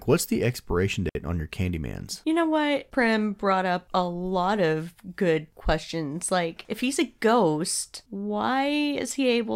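At 1.09 s the speech drops into a clean 60 ms hole, a digital wireless dropout: the receiver lost too much data and muted with a very short fade. Unlike an analogue link failing, no hiss or noise burst surrounds the gap.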